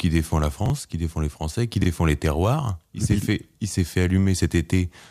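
Chunks out of order at 0.66–0.70 s, between "défend la" and "qui défend les", and at 1.82–1.86 s, before "les terroirs". In each, a 20 ms chunk plays one chunk late, giving a brief jumbled moment.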